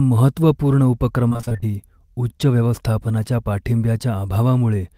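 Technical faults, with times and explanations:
1.29–1.64 s repeated packet loss (robotic sound): packets kept dropping, and each gap of up to 25 ms was patched by extending the previous sound, making the speech choppy and robotic.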